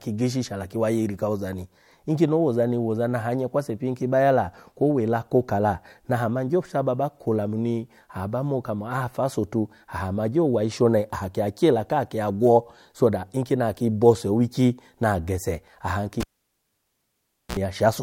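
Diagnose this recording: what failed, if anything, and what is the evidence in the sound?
Analogue wiring failed: a cable was pulled and plugged in at 16.20 s. A pop starts about 1.31 s of near silence, then a 51 ms burst of 60 Hz mains buzz as only the plug tip makes contact, and a second pop when the speech returns at 17.57 s.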